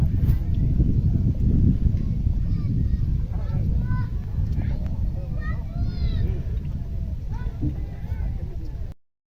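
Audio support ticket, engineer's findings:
Cut-off end at 8.92 s: sound stops mid-event, straight to digital silence. No decay, unlike a fade-out, and no resumption, unlike a dropout. Final buffers never written or played.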